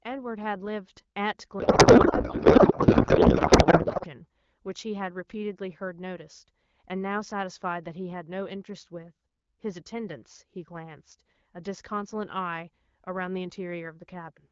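From 1.59 to 4.07 s, a codec payload misread puts the receiver's AMR fields in the wrong places, pointing to octet-aligned frames unpacked as bandwidth-efficient, so the speech becomes garbled warbling noise.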